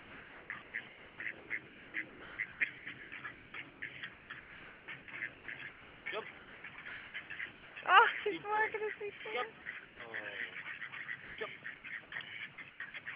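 From 0 to 7.76 s, and again at 9.18–10.0, 11.24–11.84 and 12.54–12.94 s, the sound is chopped by the voice detector, likely the sender's, gating between sending and silence. About 4.2 s of the first stretch and roughly 0.2 s of each later one become synthetic comfort noise, against band-limited audio stopping near 4 kHz.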